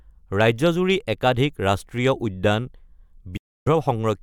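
A digital broadcast dropout runs from 3.37 to 3.67 s. The receiver stopped getting decodable frames, either because the signal vanished or because frames failed their error check, so it muted rather than play corrupted data. The speech fades out over about 8 ms and then drops into roughly 0.3 s of silence, a gap that fits around nine lost frames. When clean frames arrive again, the programme resumes mid-flow, and whatever was broadcast during that hole never returns.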